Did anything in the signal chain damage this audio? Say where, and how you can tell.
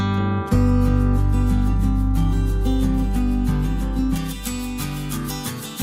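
Yes. From 4.16 s to the end at 5.82 s the sound turns thin, bright and sibilant, with the top end about 11 dB hotter at 10 kHz than at 1 kHz. This is pre-emphasis left on. A transmission link boosted the treble, and the matching de-emphasis was never applied at the receiving end. The rising slope fits a J.17 curve. Unlike added hiss or aliasing, nothing new appears: existing high frequencies are simply lifted, and the change switches in abruptly at 4.16 s.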